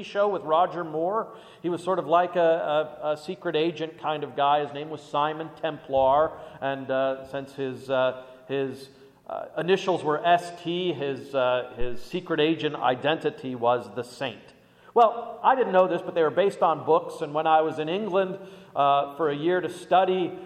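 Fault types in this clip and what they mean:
Phantom power thump: a deep thump at 11.81 s, peaking at about -17 dBFS and decaying within 71 ms, from a supply switched on or off on a live input.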